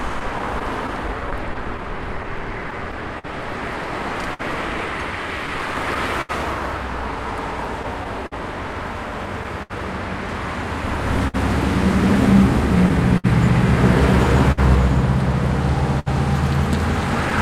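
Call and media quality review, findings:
Clock drift between sender and receiver: sender clock roughly 4% slow, jitter buffer draining, receiver stretching and repeating short pieces. Uneven timing hiccups throughout the sound.

Scattered short gaps, 0.19–17.33 s: around 30 gaps from lost or late packets, concealed by extending the last sound. Brief ticks and smears, longest near 70 ms.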